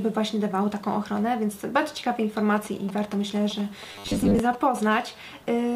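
From 2.56 to 4.79 s, GSM signalling bursts break in as galloping groups of ticks and short 217 Hz buzzes, roughly 15 dB below the sound. A nearby 2G phone is signalling, and the audio circuit rectifies its radio bursts. From 3.92 to 4.39 s, the sound turns rigid and metallic with a fixed 100 Hz buzz. This robotic sound likely comes from repeated short buffers: about half the audio is replaced by repeats of a 10 ms block. From 4.91 to 5.71 s, a steady, raspy GSM phone buzz at 217 Hz sits about 23 dB below the sound. It points to a phone on a call nearby.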